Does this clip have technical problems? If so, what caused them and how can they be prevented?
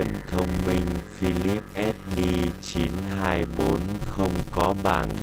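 Yes. A steady 100 Hz buzz runs throughout, and the sound plays at about 0.53 times normal speed with unchanged timbre. This is a block size mismatch (padded): shorter blocks, consistent with 256-sample writes, are zero-filled to fit longer reads. To prevent it, match block sizes between stages, or buffer the data so every read block is completely filled.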